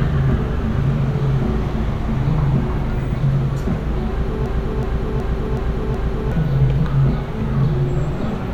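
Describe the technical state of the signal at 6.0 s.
At 6.0 s the signal is inside a system hang loop running from 4.46 to 6.32 s. The playback stalled while the hardware kept replaying one 0.37 s buffer, which fits a 16384-sample ring, five times at 2.69 Hz, a machine-gun stutter replacing roughly two seconds of sound.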